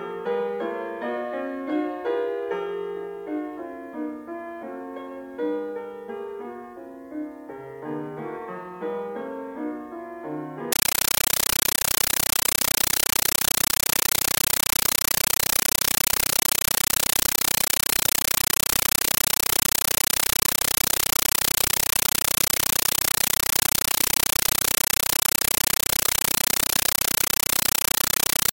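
From 10.72 s to the end, the sound is replaced by very loud, harsh static chattering at 31.25 bursts per second, each burst about 9.3 ms followed by silence. This is a compressed stream played as audio: undecoded AC-3 data, consistent with a 448 kbps stream, being reproduced as raw samples.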